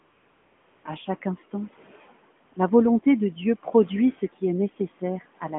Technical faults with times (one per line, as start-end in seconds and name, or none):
0.00-0.84 AMR comfort noise
2.46-2.56 AMR comfort noise